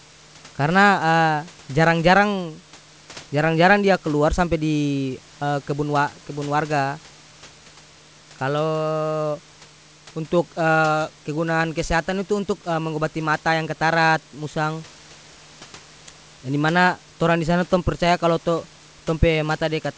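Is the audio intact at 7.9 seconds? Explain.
Yes, the audio is intact at 7.9 seconds, with nothing interrupting or distorting the speech at that moment.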